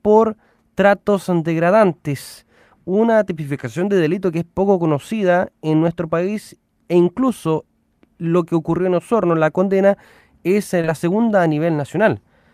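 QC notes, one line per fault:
10.81–10.85 s, short concealed packet loss: right after "la condena es eh" and before "segunda a", a stretch of the call arrived too late for the decoder. The receiver spent about 18 ms extending the preceding sound from its own pitch or as shaped noise, and about 20 ms of real audio is gone entirely. The patched span lacks the true detail and then blends back, so it comes across as a brief smear or wobble.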